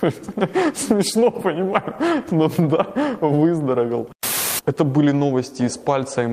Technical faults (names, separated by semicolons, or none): none